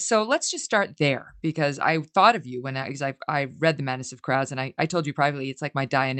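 Nothing in this speech recording stands out as a fault to my ear, with the top end rolling off around 8 kHz just as you'd expect from audio that has come through an ordinary Opus call path.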